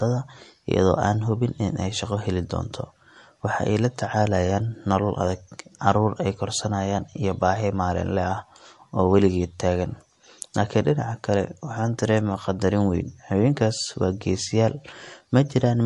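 Speech throughout shows MP3 compression damage, likely from encoding near 51 kbps: nothing survives above 11.3 kHz, and s sounds turn watery and chirpy as weak detail flickers frame to frame. That swirl, not just the missing treble, separates it from simple low-pass filtering.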